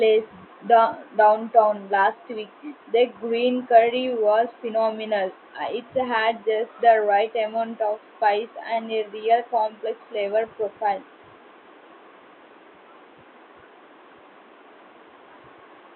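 Nothing's technically wrong with this speech recording; the only thing in the background is the room's own noise, sitting about 30 dB under the speech.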